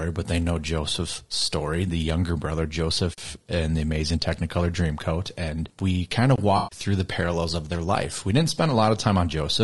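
Low-delay AAC compression runs throughout. The speech is rough and grainy with noise between harmonics, likely from AAC-ELD at about 32 kbps.

A block of digital silence at 3.14 to 3.18 s, after "story the younger brother" and before "and the amazing", cuts the audio out for 43 ms, which fits a 2048-sample buffer going unfilled.

A second block of digital silence at 6.36 to 6.38 s, right after "we kind", is a 21 ms hole, which fits a 1024-sample buffer.

AAC frame loss with concealment follows at 6.57 to 6.79 s, just before "the parallels of their". About 140 ms of frames went missing, and the decoder rebuilt them from the last good spectrum, leaving a smeared, noisy or phasey patch.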